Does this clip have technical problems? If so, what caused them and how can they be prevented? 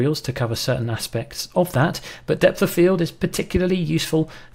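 Yes. A single loud pop sits at 1.74 to 1.77 s, rising several decibels above the surrounding sound, which carries on beneath it. It is likely a voltage step from a plug, switch, static or driver glitch, shaped by downstream circuitry. Secure connections, ground equipment and avoid switching during recording.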